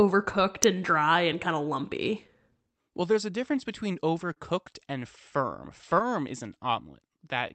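Clock drift between sender and receiver runs through the whole speech clip. The sender's clock is slow, by roughly 4 percent. Audio arrives a little slower than the receiver plays it out. The jitter buffer keeps running low. The receiver has to stretch the sound to keep playing. The result is an unsteady sense of timing. It is never one clean break. It is a faint drag that comes and goes at uneven intervals.

Repeated timing corrections follow from this, from 0.06 s to 6.93 s. The receiver keeps repeating short pieces to fill the shortfall. The net effect plays the speech at about 98 percent speed. Together the repeats add something like a fifth of a second. Each one is tiny. All of them push the same way. They are heard as slight hiccups or a loping pace, spaced irregularly.

Scattered short gaps appear between 2.27 s and 6.02 s. About ten packets arrive too late, one here and one there. 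The receiver covers each hole by extending the last sound. None is long, the longest being a few tens of milliseconds. In total they amount to well under a tenth of a second. They come through as brief ticks or smears on otherwise clear speech. The call codec, likely Opus, keeps its band limited to about 8 kHz.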